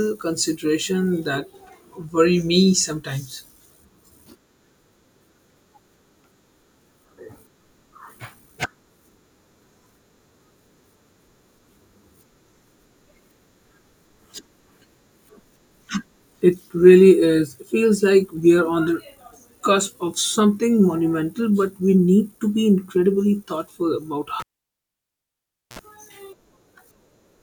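At 24.40 s, after "be incredibly thoughtful about", a cable pulled and plugged in: a pop, 1.34 s of near silence, 58 ms of 60 Hz mains buzz, then a pop at 25.79 s.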